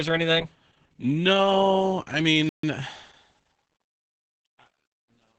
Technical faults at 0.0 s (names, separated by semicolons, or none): Opus voice compression